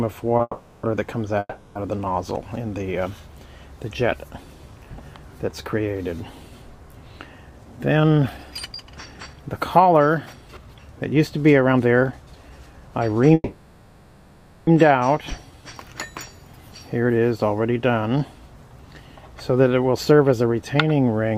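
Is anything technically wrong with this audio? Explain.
Yes. The clip has four kinds of network playback fault.

Short stall from a late packet, 0.37 to 0.41 s: a packet was not there when it was due, so the jitter buffer ran empty and the receiver stretched the last sound by 20 ms until the packet arrived, then resumed from the same point. Nothing is lost, but the sound there is held slightly too long, with a faint buzzy smear.

Call audio freeze, 0.41 to 0.85 s, 1.39 to 1.77 s and 13.34 to 14.69 s: packets were likely held up in transit, emptying the buffer. The receiver keeps the last sound going as a fading buzz for about 420 ms, 360 ms and 1.33 s respectively, each ending in a brief silence of 20 to 30 ms, and then the audio picks up where it stopped. Nothing is missing, but each freeze inserts a gap and pushes everything after it later.

Jitter buffer speed-up, 7.51 to 13.23 s and 20.11 to 20.90 s: after delayed audio piled up in the buffer, the receiver cut its excess delay by repeatedly removing tiny pitch-period slices. 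The first stretch plays at 111% speed and sheds roughly 0.7 s. The second plays at 109% and sheds about 70 ms. Pitch stays the same, but the sound feels hurried and its timing compressed.

Jitter buffer slow-down, 15.22 to 15.74 s: with the buffer running low, the receiver rebuilt its reserve by repeating single pitch periods, adding 62 ms of audio. That stretch plays at 89% speed with unchanged pitch, so sounds are drawn out and may carry a slight warble.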